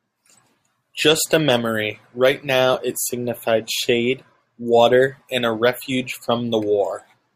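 At 2.73 s, the speech has a brief lost LE Audio frames fault. A dropout of about 7.5 ms fits a single missing frame. The decoder filled it by reusing the previous spectrum with scrambled signs, so a tiny noisy blip replaces the speech.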